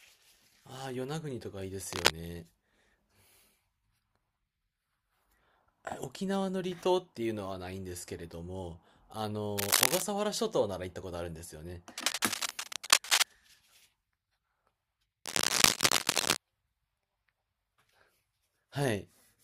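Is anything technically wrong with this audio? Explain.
Yes. Cable scratch noise appears at 1.91 to 2.12 s, 9.58 to 10.02 s, 11.98 to 13.33 s and 15.25 to 16.38 s. It is likely caused by a worn cable, plug or control being moved, so that its contact resistance jumps about erratically and injects ragged bursts of noise. Each burst sits roughly 5 dB above the speech and is heard as scratching and rustling laid over it, lasting from a fifth of a second to over a second.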